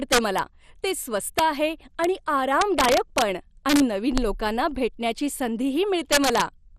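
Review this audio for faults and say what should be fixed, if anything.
Dull, gurgling, granular speech runs through the whole clip, with nothing above about 14.2 kHz. This is MP2 compression at a rate that likely fits around 64 kbps: starved of bits, upper sub-bands switch off and the remaining bands are coarsely quantised. To prevent it, encode from a lossless source at a higher bitrate or with a more efficient codec.

Violent, sharp cracks break out on loud peaks at 0.12–0.39 s, 1.39 s, 2.04 s, 2.61–3.22 s, 3.69–3.80 s, 4.18 s and 6.12–6.41 s. The last is the harshest, pushed about 5 dB past the limit. This is integer overflow: samples exceeding the largest integer wrap to the opposite sign instead of being held at the limit. To prevent it, use saturating (clamping) arithmetic or leave headroom before any integer conversion.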